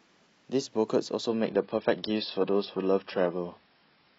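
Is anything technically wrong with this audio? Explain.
Yes. From 1.28 s to the end, the speech drops to an adaptive stream at a lower bitrate: the connection slowed, highs vanish above 5.6 kHz, artefacts rise, which fits roughly 16 kbit/s.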